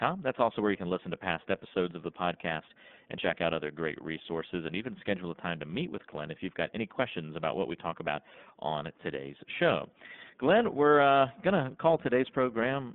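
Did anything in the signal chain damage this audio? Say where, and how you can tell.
Yes. The damage is at the codec stage, from the iLBC codec throughout the speech. A spectrogram shows an empty band above 3.6 kHz and little below 200 Hz. Each 30 ms frame is coded independently, which gives the plainly rough, synthetic texture and fits the 13.33 kbps mode.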